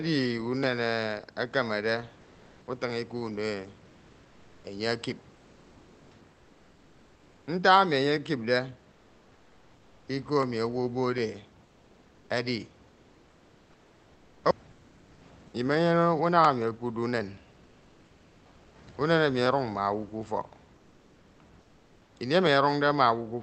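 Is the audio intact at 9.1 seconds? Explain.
No. From 8.91 to 10.07 s, about 1.2 s, there is comfort noise in place of the background. During that pause the sender likely stopped transmitting under discontinuous transmission, and the receiver filled the gap with steady, featureless synthetic noise, about 4 dB quieter than the real room background it replaced.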